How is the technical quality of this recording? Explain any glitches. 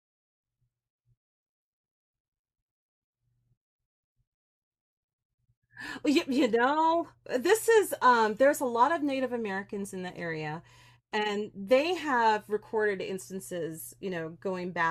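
No glitches can be heard anywhere in the recording. Nothing in the speech calls for a technical explanation.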